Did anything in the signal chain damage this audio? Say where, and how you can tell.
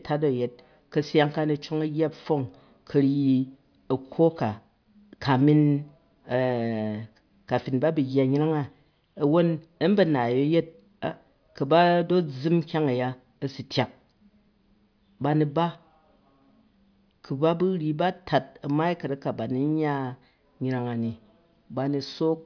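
No, nothing in the chain audibly damaged this speech recording, and no stage from capture to playback leaves a mark anywhere in it.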